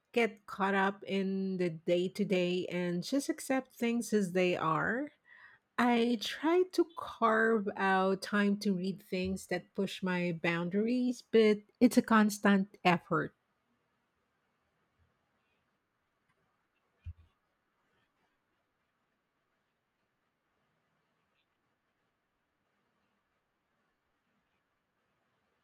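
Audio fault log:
Nothing in the speech recording stood out as a fault on listening.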